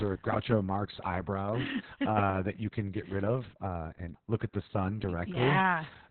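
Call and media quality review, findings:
Opus voice compression, whole clip: speech muffled, nothing above 4.3 kHz, hoarse and slightly robotic. Coarse SILK excitation, not a plain low-pass; fits narrowband at roughly 6 kbps.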